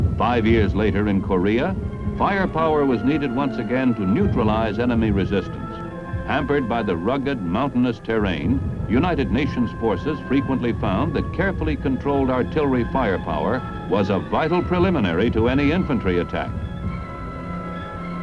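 No technical faults can be heard anywhere in the recording. There is nothing in the sound that calls for a fault description.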